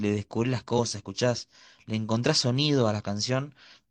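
At 0.75 to 0.79 s, damaged data in the compressed stream makes the decoder misread frames and lose sync, giving a brief glitch in the speech.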